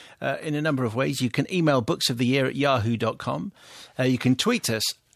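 No technical faults can be heard anywhere in the speech. Nothing in the audio calls for a timestamp or a note.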